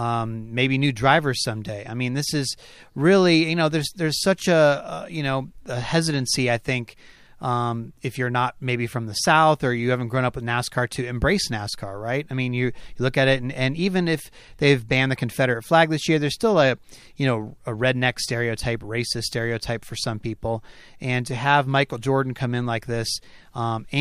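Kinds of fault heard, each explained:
No technical fault can be heard anywhere in this speech recording. There is nothing to list under any kind.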